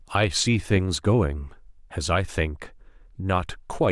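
Nothing goes wrong anywhere in this bit of speech; there's no moment where a technical fault shows up.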